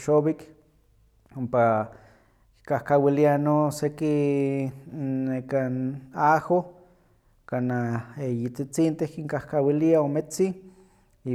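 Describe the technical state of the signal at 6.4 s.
At 6.4 s the speech signal is intact, with no audible technical fault at that point.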